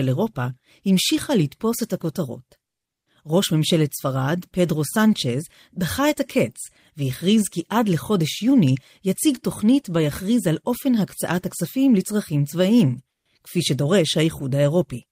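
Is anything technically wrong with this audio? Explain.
Yes. From 13.10 to 13.25 s, comfort noise replaces the background: a flat, featureless hiss about 10 dB quieter, likely from discontinuous transmission (pointing to Opus DTX) during the quiet gap.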